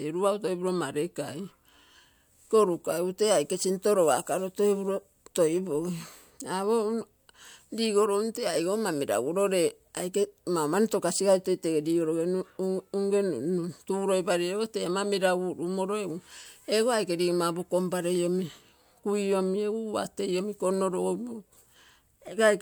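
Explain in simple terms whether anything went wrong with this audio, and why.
Nothing went wrong here; the speech has no audible fault anywhere in the recording.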